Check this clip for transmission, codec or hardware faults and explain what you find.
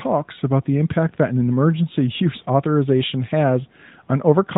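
No transmission, codec or hardware faults are present; the speech comes through a narrowband mobile channel that cuts everything above 4 kHz and leaves only a light AMR codec colouring, which fits the 12.2 kbps AMR-NB mode working as intended.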